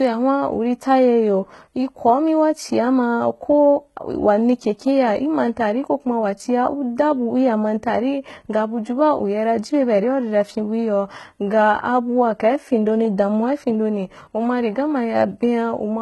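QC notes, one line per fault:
Throughout, HE-AAC compression: s sounds come out gritty and lispy, the treble has a metallic sheen, and nothing is left above 11.8 kHz. The likely cause is spectral band replication rebuilding the highs from copied lower bands, which fits a bitrate near 16 kbps.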